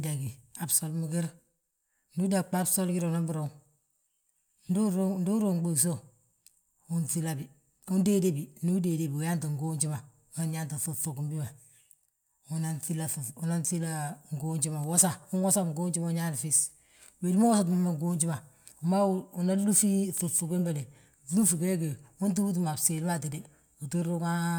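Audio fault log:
4.68 s, lost LE Audio frames: about 15 ms of Bluetooth LE Audio data, consistent with two 7.5 ms LC3 frames, never arrived, so the decoder refilled the gap by repeating the last speech spectrum with randomised signs, leaving a brief rough, noisy smear.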